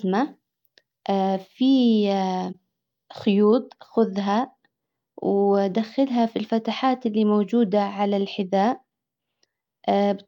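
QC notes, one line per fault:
2.52–2.55 s, corrupt frame concealed: the speech is disturbed for roughly one frame's length, which fits a single damaged AAC frame that the decoder detected and papered over.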